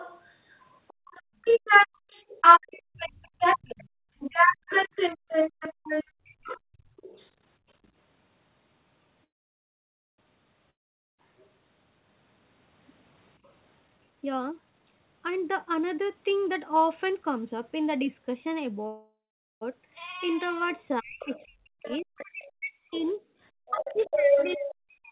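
A speech recording from a voice call, band-limited with nothing above 4 kHz, which fits a narrowband telephone codec such as G.711. The other side's voice leaking through is heard from the start to 7.78 s, a little louder than the talker. It returns from 21.2 s to the end at the same strength. The likely cause is a loudspeaker echo that the echo canceller failed to remove. Two very faint scraps of it also appear, at 11.38 to 11.49 s and 13.43 to 13.50 s. Between 0.94 and 6.96 s the background is gated by the echo canceller. The room sound drops out in short bursts while the far side plays, about a second and a half in all. The deepest drop is about 39 dB. The sound then returns when the canceller releases. Speech is suppressed in double talk at 4.88 to 4.92 s, a brief but deep dip. It happens again from 21.0 s to the end, where the talker's voice is pushed far down while the other side speaks. 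The likely cause is that the canceller could not tell the talker from the echo, so it turned both down. A call audio freeze fills 9.24 to 10.20 s. The last sound fades into near silence for most of that 942 ms. Then the audio resumes where it stopped, with nothing lost, only delayed, likely because packets were held up and the jitter buffer ran empty. A second freeze runs from 18.87 to 19.63 s, 744 ms long, with the sound fully silent for part of it. A long network dropout follows the first freeze at 10.70 to 11.20 s. The audio fades to silence and comes back further on. About 480 ms of the sound is simply gone, likely lost in transit and never played. Jitter buffer speed-up runs from 13.84 to 17.58 s. The audio plays at 125 percent speed with unchanged pitch and sounds hurried. Short pitch-period pieces were cut repeatedly, about a second in total, to drain the extra buffered delay.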